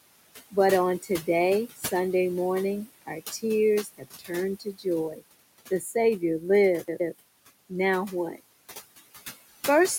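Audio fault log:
Throughout, noise suppressor artifacts: the room noise, about 13 dB below the speech, dips between words and swells beneath them, as the suppressor cuts noise-only bands by about 18 dB.
1.76–1.85, 2.88–3.43, 3.84–4.31, 4.6–4.86, 5.13–5.23, 5.8–5.94 s, speech cut by the noise suppressor: brief stretches of speech sound swallowed or faint, dropping by up to about 21 dB, because the suppressor mistook them for noise.
6.84–7.14 s, CD stuck on one turn: a quick, even stutter as a 150 ms slice plays twice with a tiny mute at each jump, the laser skipping back one track.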